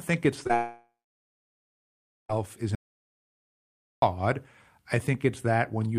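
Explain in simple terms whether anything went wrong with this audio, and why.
Short concealed packet loss hits twice just after "think it's", at 0.43 to 0.47 s and again at 0.47 to 0.51 s. Each time about 20 ms of the call arrived too late, so the receiver carried the last sound forward to cover the hole, giving a brief smear before the real audio resumed.

Long network dropout is the likely cause of the gap from 0.55 to 2.31 s, still just after "think it's". The last sound is stretched out and fades, and about 1.39 s of that stretch is silence. The audio then returns further on, with everything in between missing.

Audio dropout to silence likely explains the gap from 2.75 to 4.02 s. The sound cuts out abruptly and about 1.27 s of flat silence follows, with no background noise, as if the input was lost while recording went on. Whatever happened then is gone.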